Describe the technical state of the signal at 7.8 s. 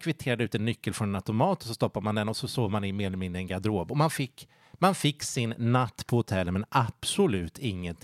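At 7.8 s the speech signal is intact, with no dropout, click, distortion or other fault audible at that point.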